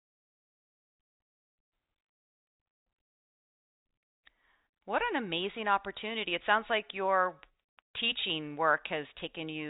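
The speech arrives through ordinary G.711 telephone coding with no faults, its band ending near 3.8 kHz as a fixed-line telephone channel would leave it, and any quantisation noise from the coding stays faint beneath the signal.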